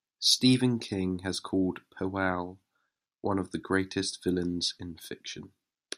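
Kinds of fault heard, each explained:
No faults can be heard.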